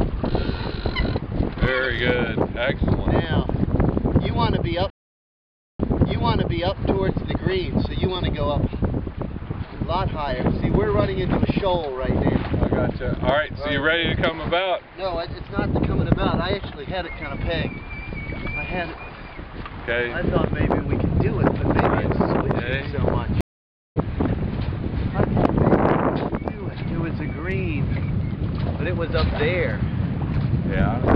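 At 4.90 s the connection drops and the player rebuilds its decoder mid-stream, a stream reconnect. The sound stops for 0.88 s and then resumes 0.98 s earlier, replaying material already heard. At 23.41 s a second reconnect leaves 0.55 s of silence, and playback resumes about half a second later, skipping that stretch.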